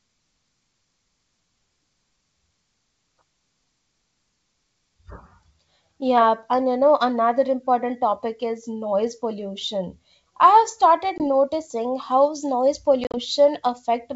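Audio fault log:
11.18–11.24 s and 13.04–13.19 s, packet loss on an ADPCM call: the first is a clean 20 ms dropout. The second spreads 70 ms of silence over 100 ms, with the longest hole 40 ms. After each gap, the decoder's predictor and step size have drifted from the sender's, so the wideband G.722 sound comes back slightly distorted before it resynchronises.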